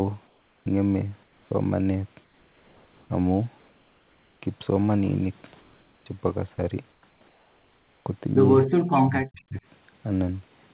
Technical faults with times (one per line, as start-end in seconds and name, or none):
0.27-0.66 comfort noise in place of the background
1.23-1.51 comfort noise in place of the background
2.15-3.10 comfort noise in place of the background
3.58-4.42 comfort noise in place of the background
5.61-6.06 comfort noise in place of the background
6.56-6.58 sound dropped by the voice detector
6.91-8.06 comfort noise in place of the background
8.91-9.56 speech suppressed in double talk